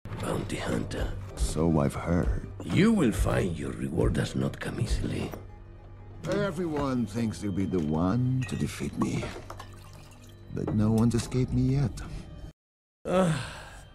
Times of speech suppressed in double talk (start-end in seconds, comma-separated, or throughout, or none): none